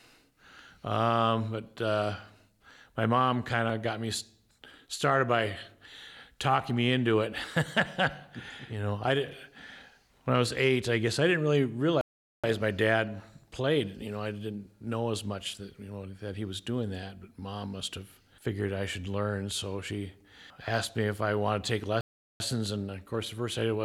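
From 2.70 s to 6.70 s there are periodic USB or driver dropouts: about five brief ticks spaced 1.0 s apart. At each one, roughly half a millisecond of audio is skipped when the bus or driver is blocked, leaving a small discontinuity in the waveform.

At 12.01 s the output cuts to silence for 425 ms until 12.44 s, and at 22.01 s it does so again for 391 ms until 22.40 s. These are playback stalls, likely from the player's buffer running dry or its thread being held up, after which the sound resumes.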